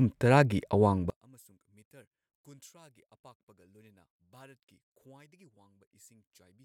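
One channel inverted, from 1.10 s to the end at 6.64 s: the speech suddenly falls by about 34 dB to near silence, most likely because one stereo channel has its polarity reversed. When the two channels are summed to mono, whatever they share cancels, and centred speech is almost entirely shared material. Only the small difference between left and right survives, heard as a faint residue of the speech.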